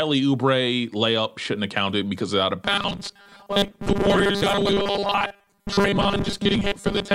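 At 2.65 s the speech turns into a rigid, metallic buzz that lasts to the end. It still roughly tracks the words. The fixed pitch sits at 200 Hz. This is robotic sound from repeated short buffers. The likely cause is a 5 ms chunk looping most of the time while fresh audio is skipped.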